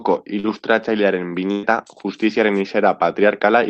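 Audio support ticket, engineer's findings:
Short concealed packet loss, 0.39–0.47 s: brief smear where about 40 ms never made it to the decoder in time. The jitter buffer/decoder concealment stretched the previous sound across the hole for roughly 40 ms, then crossfaded back into real audio.

Burst of packet loss, 1.51–1.66 s: a longer run of lost or late packets, about 120 ms of speech gone. The decoder kept extending the last sound and fading it for around 114 ms, no dropout to silence, then the speech picks up further along with that chunk skipped.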